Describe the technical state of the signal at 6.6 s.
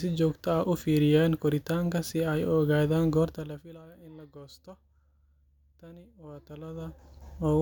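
A fine ticking rides on the speech from 6.16 to 7.34 s, zipper noise from a roughly 25 dB level change made in unsmoothed 1 dB steps, about twenty each second.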